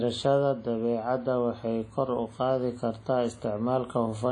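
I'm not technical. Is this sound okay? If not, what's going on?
No, not quite. All the way through this speech clip there's a swishy, ringing quality, with a hiss that swells and fades along with the talking. It's likely WMA compression, an older Windows Media Audio format squeezed hard to save space. That squeezing smears small errors around each sound and throws away quieter detail, including everything above 10.1 kHz, so the top end sounds dull and the rest watery.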